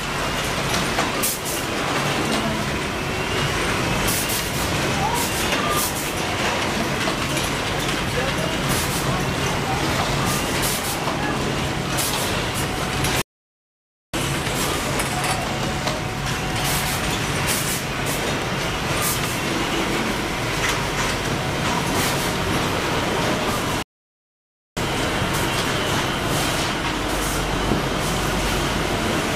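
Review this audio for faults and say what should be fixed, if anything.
Two playback stalls: the sound halts mid-flow and the output goes silent from 13.22 to 14.14 s, then again from 23.82 to 24.77 s, each gap lasting a little over 0.9 s. The likely cause is the player running short of data or its output thread being blocked until it recovered. A dropout or buffer underrun glitch is only milliseconds long, whereas these silences are long enough to hear as a pause. Deeper buffering, with decoding kept off the audio thread, should prevent them.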